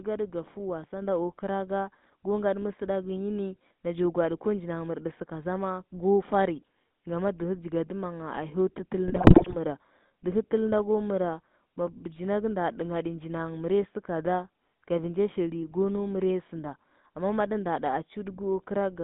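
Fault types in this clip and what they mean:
GSM full-rate codec: The early GSM vocoder, which sounds like a 13 kbps coding, rebuilds speech from pulse excitation, giving a buzzy, gravelly roughness, with the band held to roughly 150 Hz to 3.7 kHz.
Microphone volume stepped up: At 1.02 s the input gain jumps about 4 dB in a single step, lifting speech and background together.
GSM bit errors: From 9.08 to 9.56 s corrupted codec parameters distort the spectrum and level frame by frame, producing squawks, pops and gargling in the speech.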